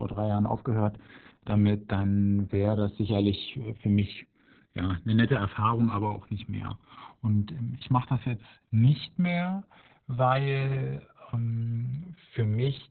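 From start to finish, the two channels drift apart. They come from devices on separate clocks, off by something like 200 parts per million. The delay between them grows to roughly 2 ms by the end. Summed to mono, comb notches sweep slowly, heard as slow flanging.

Opus voice compression also runs throughout, in its SILK speech mode. Nothing is heard above 4.4 kHz, a narrowband sound. The heavy damage points to a very low bitrate, around 6 kbps. The speech comes out muffled, hoarse and slightly robotic.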